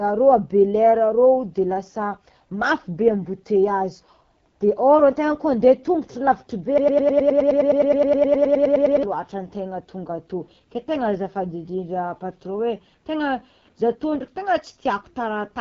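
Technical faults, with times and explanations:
throughout: AMR wideband (HD Voice) codec. The speech has a rough, raspy, buzzy texture and nothing above 7.2 kHz, which points to AMR-WB at one of its lowest rates, around 8.85 kbit/s, where the pulse-excited vocal tract model no longer reproduces detail cleanly.
6.78 to 9.03 s: broken-record loop. Right after "lavitry be", a 104 ms fragment repeats exactly, back to back, about 22 times, and the speech that belonged in those 2.25 s is gone. The likely cause is a stalled player, encoder or stream resending its last buffer.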